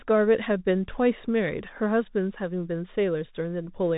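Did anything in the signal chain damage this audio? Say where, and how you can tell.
Yes, the damage happens at the codec stage, and it runs through the whole speech clip: this is the Bluetooth CVSD headset codec. Everything above about 3.8 kHz is missing, giving the boxed-in narrowband quality of a headset link. The s sounds come out scratchy, and a granular hiss sits under the speech. CVSD sends a single up-or-down bit per sample, consistent with a 64 kbps stream, so its adaptive step lags fast, loud high-frequency content and distorts it.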